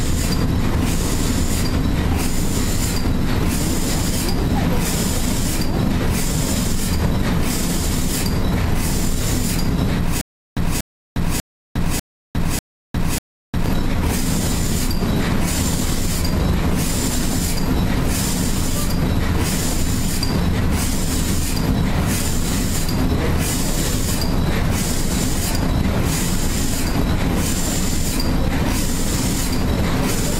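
A stutter with silent gaps runs from 10.21 s to 13.66 s: a 239 ms fragment of the sound plays, then about 355 ms of dead digital silence follows, and the pair repeats six times at an even 594 ms period. This is likely a stalled player or stream that, on each retry, replays the last buffered fragment before running dry again. Whatever should have played during those three and a half seconds is missing.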